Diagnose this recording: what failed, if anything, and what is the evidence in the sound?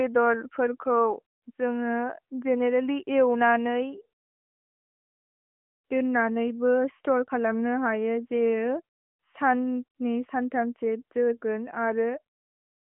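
Nothing in this recording stood out on listening as a failure at any stage of the chain.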